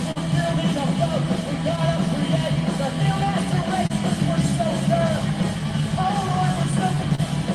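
The sender's clock runs roughly 2 percent slow against the receiver's, so this is clock drift between sender and receiver. The jitter buffer keeps draining, and the receiver has to fill time to keep playback going. It is heard as small timing hiccups scattered unevenly through the clip. On a spectrogram this would appear as slightly smeared or repeated fragments rather than clean gaps. Above about 12 kHz the spectrogram is empty throughout, the ceiling of the Opus call path, which fits a bitrate around 32 kbps.

The first short stall from a late packet comes at 0.11 to 0.18 s. A packet arrived late, the buffer ran dry, and the receiver stretched the last sound by 42 ms before resuming exactly where it left off. Nothing is lost, but the sound hangs on too long with a faint buzzy quality. On a spectrogram the harmonics run as flat, unchanging horizontal bands for that stretch. In the waveform it shows as a repeating, slightly dipped cycle.

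From 1.24 to 6.96 s come repeated timing corrections. The receiver keeps inserting tiny pieces to make up for the slow sender, playing this stretch at about 99 percent speed and adding about 70 ms in total. Every edit goes the same way, lengthening, but at uneven spacing. They come across as a barely unsteady tempo. The waveform shows small duplicated segments at irregular points, and the spectrogram shows faint vertical seams.

Two more stalls follow, at 3.87 to 3.92 s and at 7.15 to 7.20 s, each holding the sound for 29 ms. They are shorter than the first but sound the same: a brief frozen, buzzy sustain, seen as a short flat-banded patch in the spectrogram.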